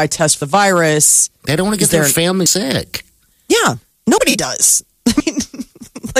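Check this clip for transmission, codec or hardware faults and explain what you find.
Four abrupt skips break up the speech, at 0.42, 2.46, 4.18 and 5.20 s. At each, the sound jumps straight ahead with no gap of silence, losing around a tenth of a second at 0.42 s, closer to 150 ms at 2.46 and 5.20 s, and only a brief sliver at 4.18 s. The likely cause is a dropped buffer (overrun): samples were overwritten before being read, so a chunk vanished and the surrounding audio was spliced together.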